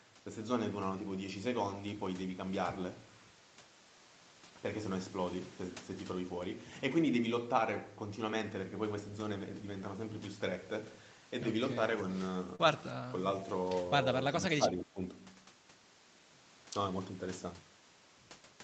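It's a speech recording over a call, with the top end stopping around 8 kHz, which fits an Opus stream at wideband. At 12.55 to 12.61 s there's a short concealed packet loss: roughly 40 ms of audio never arrived, and the receiver papered over most of it by stretching out the preceding sound, so you get a quick smear or wobble there. Then the speech dips twice, which is likely speech suppressed in double talk, the echo canceller ducking this talker while the far end was also talking. The first dip is at 12.93 to 13.15 s, about 10 dB down for around a tenth of a second. The second is at 14.31 to 14.99 s, deeper at about 15 dB and spread over roughly half a second.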